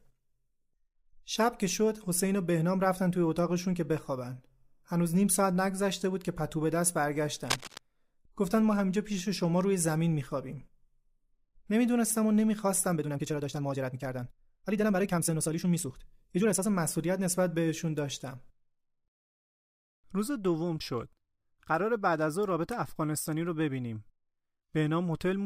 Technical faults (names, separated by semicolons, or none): cable scratch noise; time-stretched section